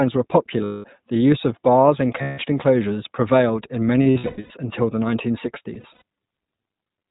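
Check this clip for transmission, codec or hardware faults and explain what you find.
Two faults are present in this speech clip: iLBC codec coloration throughout, and four bursts of lost iLBC frames.

The iLBC codec shapes the whole clip. It codes each short frame's excitation independently, and the roughness is consistent with 20 ms frames at about 15.2 kbps. Nothing passes above 4 kHz, so a spectrogram shows a hard ceiling there. The coding damage is plainly audible as a slightly rough, synthetic edge on every syllable.

The lost iLBC frames fall at 0.64–0.86 s, just before "the use of bars", and at 2.22–2.40 s, between "use of bars and" and "enclosures prevailed in". The third loss is at 4.02–4.52 s, between "enclosures prevailed in" and "until the nineteen". The last is at 5.74–6.02 s. The first two are solid gaps of 200 ms and 160 ms. The later two are broken up: 380 ms of loss spread over nearly half a second, with runs of up to about a tenth of a second, then 140 ms spread over 280 ms. 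In each gap the decoder fills in by repeating the last pitch cycle mixed with noise, so the gaps sound like a held, buzzy or breathy vowel. Clean speech returns almost immediately after each gap because every frame decodes on its own. On a spectrogram the fills appear as flat, smeared harmonic bands. The waveform shows a repetitive, slightly fading pattern, and in the scattered losses the short fills alternate with genuine speech.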